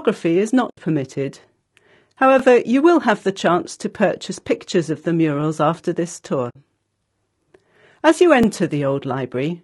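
Through the whole clip the speech sounds rough and grainy, with noise between the harmonics, likely from low-delay AAC compression, in keeping with AAC-ELD at around 32 kbps. At 0.69 s there's AAC frame loss with muting: an 80 ms soft-edged hole where the decoder zeroed what fits four lost frames, fading out and back in. At 2.39 s, right before "you will have the", overlapping chunks show up as a small stutter. Each 3-second chunk starts 20 ms early, so that slice plays twice. The same stutter comes back at 5.41 s, between "purchase pictures of the" and "after this". At 6.49 s, just after "after this", a second muted gap of 60 ms fits three lost frames. The last stutter lands at 8.43 s.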